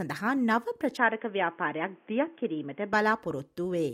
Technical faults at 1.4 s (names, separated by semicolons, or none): input switched to a poorer device